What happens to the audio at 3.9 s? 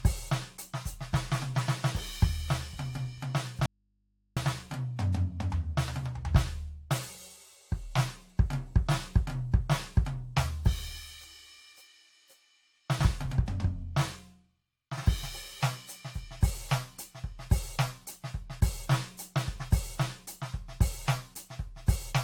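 The music signal was likely lost upstream while the rest of the chain stayed live, an audio dropout to a faint residue lasting from 3.66 to 4.37 s (about 0.71 s). The sound cuts off abruptly, leaving only mains hum about 45 dB below normal level, then returns mid-flow. Underneath, there is generation loss, likely from the audio passing through AAC-LC at 96 kbit/s about four times. The quantisation damage from each pass stacks, giving a swirly, hollow smear with blurred attacks and nothing above 19.2 kHz.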